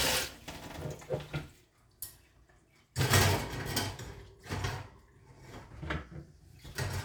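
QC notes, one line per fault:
No faults heard.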